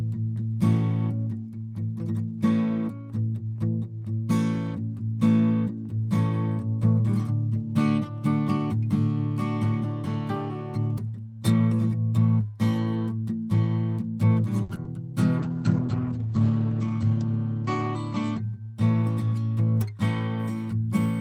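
A short stall from a late packet hits this music at 14.63 to 14.71 s: the jitter buffer ran dry, so the last sound was held for 60 ms and then resumed, losing nothing but adding 60 ms of delay. Short concealed packet loss follows at 14.75 to 14.78 s and 14.84 to 14.87 s, where about 20 ms went missing each time and extrapolated audio smears over the gaps. A call bitrate drop from 15.39 to 18.75 s cuts the encoder from 32 to 10 kbps and the bandwidth from 20 kHz to 8 kHz, bottoming out for about 1.1 s, so the music turns muffled and rough. Inside that stretch, a jitter buffer speed-up from 16.70 to 17.11 s trims pitch-period slices, roughly 50 ms in total, pushing playback to 111% and unsettling the tempo.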